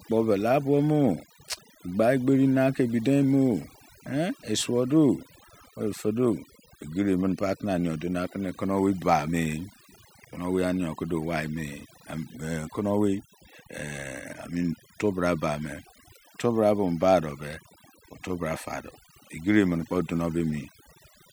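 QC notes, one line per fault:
Throughout: overdone noise removal. The noise reduction was pushed too hard, so the quiet speech detail gets gated out with the noise, leaving twinkling specks in near silence.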